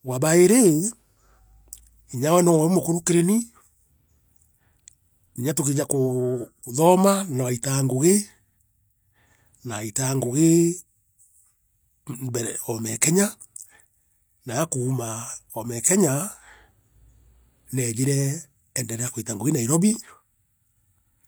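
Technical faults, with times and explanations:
No technical faults can be heard in this speech clip.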